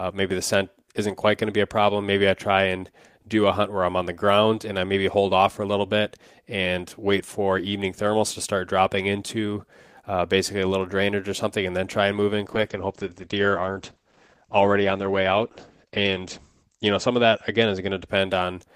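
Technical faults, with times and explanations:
12.5–18.21 s, call bitrate drop: Just after "try and move in", the speech turns coarse and muffled as the encoder is starved of bits. The sound points to the rate falling from around 32 kbps to about 11 kbps, bottoming out for roughly 3.9 s. At that rate the Opus call path narrows its audio bandwidth from 20 kHz to 8 kHz, so the top end disappears while coarser quantisation adds a rough, watery texture.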